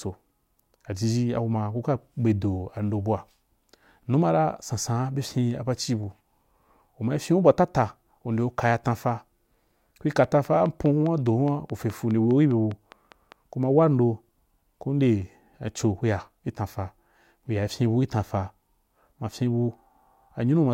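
Speech, with a train of clicks from 10.24 to 13.33 s. A sharp tick lands about 4.9 times per second, at a steady pace. That makes some fifteen clicks in all. Each has much the same shape. They peak at roughly the level of the speech itself. They carry on through pauses as well. The likely cause is interference from nearby equipment or a faulty connection or power supply.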